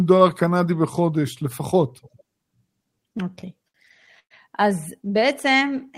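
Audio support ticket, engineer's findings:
Repeated stalls (stutter), 2.95 to 4.34 s: eleven short hitches, the last sound held and stretched, longest about 113 ms, fading in the longer ones. Probable component: receiver jitter buffer running dry on late packets. Nothing skipped, only delayed, about a fifth of that span filled. That separates it from packet loss, where audio goes missing.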